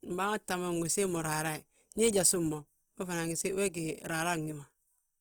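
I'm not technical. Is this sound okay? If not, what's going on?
No. Across the whole clip, the speech has a rough, grainy, slightly hissy texture, most likely from Opus compression. The file was squeezed hard to save space, and where detail was thrown away the encoder filled the gaps with noise-like material. Unlike MP3 damage, it has less of a watery, swirling sound, and unlike a simply muffled recording, the highs are still there. They just sound coarse and gritty instead of clean.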